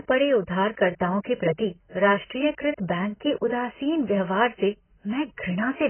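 AAC compression runs throughout the speech: nothing reaches above 3.1 kHz, so sibilants turn dull, smeared and fizzy, with a warbling texture. This is likely heavy AAC-LC coding at a very low bitrate near 12 kbps, cropping the top band and quantising coarsely.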